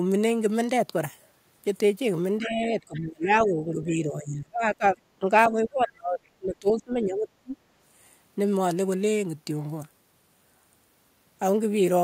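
Speech recording in which the talker's level collapses in three stretches, from 2.38 to 5.0 s, 5.19 to 6.21 s and 6.38 to 7.57 s, dipping by roughly 20, 30 and 25 dB at the deepest points. This is speech suppressed in double talk: the likely cause is an echo canceller that, with both ends talking at once, could not tell the near talker from the loudspeaker return and attenuated the whole microphone signal, so the voice thins and drops out in pieces while the far end speaks. Inside the first stretch, the other side's voice leaks through, faint and fragmentary, from 2.44 to 2.68 s at around 20 dB below the talker and again from 2.94 to 2.99 s at around 25 dB down. The far-end audio is likely reaching the microphone from the talker's own loudspeaker, and the canceller left residual echo that it did not fully subtract.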